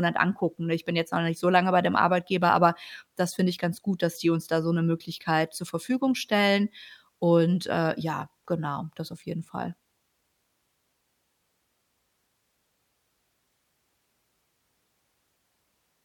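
No technical faults are audible anywhere in this speech recording.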